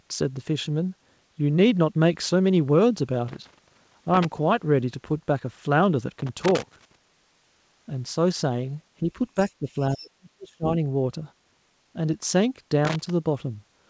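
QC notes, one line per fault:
3.28–4.25 s, 6.19–6.96 s and 12.85–13.10 s, loose connector crackle: irregular bursts of scratchy crackle, lasting under a second each. A worn or dirty contact is making and breaking as it shifts, so the signal is chopped and any DC on the line adds pops.
9.40–9.53 s and 9.79–9.96 s, other side's voice leaking through: brief, faint scraps of a second voice, roughly 25 to 30 dB under the main speech. This is likely far-end audio from the talker's loudspeaker that the echo canceller failed to fully remove from the microphone.
9.59–9.76 s and 9.92–10.72 s, speech suppressed in double talk: the main voice dips by about 10 dB at first, then drops much further, by roughly 40 dB, for most of the second stretch. This is likely the echo canceller attenuating both voices while both sides talk at once.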